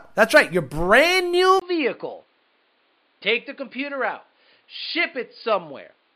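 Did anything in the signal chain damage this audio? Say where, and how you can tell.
Yes. At 1.6 s the speech stops for about 20 ms, then comes back about 10 dB quieter, duller and boxier. From there to the end it has nothing above 4.9 kHz and a new noise floor roughly 40 dB below the speech. This points to the input stage: the capture path likely switched to an input switched to a poorer device, whose narrower bandwidth, different gain and own self-noise replace the original microphone's.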